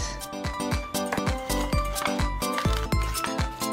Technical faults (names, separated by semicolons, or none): compressed frames skipped